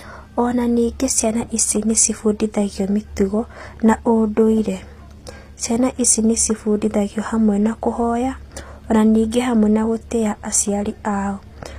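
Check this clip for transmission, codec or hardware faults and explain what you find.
One codec fault runs through the whole clip. The treble sounds rebuilt rather than real, and nothing is left above 15.5 kHz. The likely cause is HE-AAC compression, which fits a low bitrate around 24 kbps. The upper band is copied up from lower frequencies, so s sounds come out gritty and metallic.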